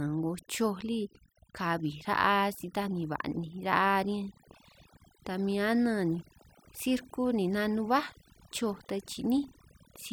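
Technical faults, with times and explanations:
Throughout: overdone noise removal. The noise reduction was pushed too hard, so individual frequency bands near the noise level get cut deeply or muted. Quiet parts of the speech vanish with them. The background becomes near silence with twinkling specks.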